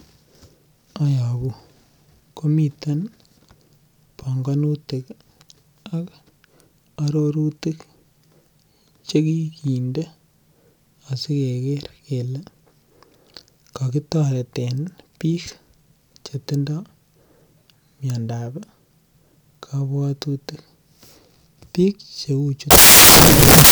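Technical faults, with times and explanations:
22.71–23.71 s, samples built from the wrong bytes: for the final second of the speech the bytes of each sample are assembled incorrectly, so the rapidly fluctuating low-order bits land in the high-order positions and the sound becomes loud, harsh broadband noise.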